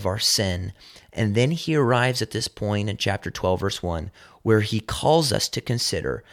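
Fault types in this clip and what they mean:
No technical faults can be heard in the speech, and the signal stays continuous and undisturbed throughout.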